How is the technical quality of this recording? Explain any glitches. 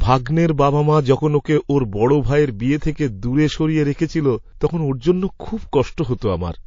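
The recording is clearly degraded by lossy coding, with two short pre-echo glitches on top.

MP3 compression runs through the whole clip. The speech sounds watery and swirly, and s sounds turn metallic and chirpy. This is likely a heavily squeezed MP3 encode. Its damage level fits a low bitrate of around 32 kbps. With so few bits, the encoder switches weak frequency lines on and off between frames, which causes the swirl.

Pre-echo occurs at 2.80 to 2.82 s and again at 6.18 to 6.22 s. A hiss comes just before each sharp attack, and the attack itself sounds smeared. The first hiss lasts 22 ms and rises about 14 dB. The second lasts 37 ms and rises about 20 dB. The codec spreads its noise across a 72 ms block. The smearing suggests it never switched to shorter blocks, so noise meant for the loud onset leaks into the quiet moment before it.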